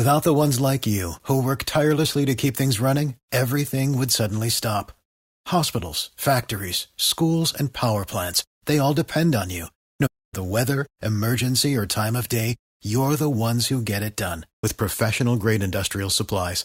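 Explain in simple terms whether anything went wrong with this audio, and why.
Two things went wrong. At 10.06 s the speech goes silent for about a quarter second, then resumes with "the weather emergency or". That is a playback stall, likely the player briefly running out of data. At 14.63 s, right after "who get it done", the speech jumps ahead abruptly. That is a stream segment skipped, likely one chunk failing to load.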